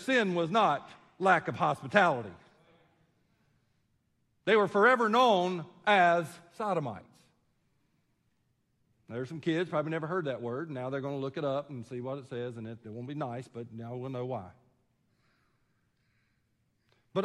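No technical faults can be heard anywhere in this recording.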